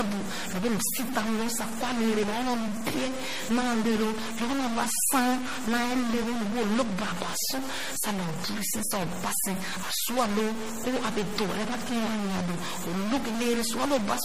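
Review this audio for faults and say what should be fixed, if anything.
Throughout the speech, a data bit in the converter or its line is likely stuck at a fixed value. Roughly half the samples land off by that bit's weight in a waveform-dependent pattern, adding distortion across the whole clip and filling the pauses with noise. Fix the faulty line or converter and test each bit with a ramp signal before recording.

For the full length, the sound was likely squeezed through MP3 at a rate consistent with about 40 kbps, and the damage is plainly audible. Weak frequency lines drop in and out between frames, giving a watery, swirly texture, and nothing remains above 15.2 kHz. Keep an uncompressed or lossless master, and encode only at a much higher bitrate.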